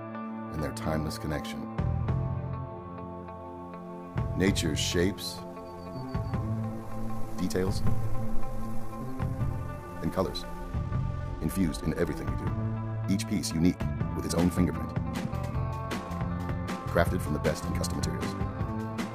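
From 5.38 s to the end, software likely time-stretched the audio to 1.56 times speed, keeping pitch steady while the pace jumps abruptly and sounds rushed.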